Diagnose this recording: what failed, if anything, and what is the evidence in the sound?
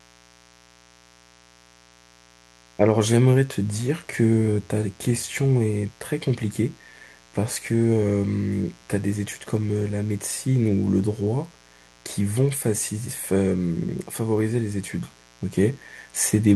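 A steady, raspy mains buzz sits under the speech throughout, well below it. Analogue wiring fault: switching spikes at twice 60 Hz spray harmonics into kilohertz range.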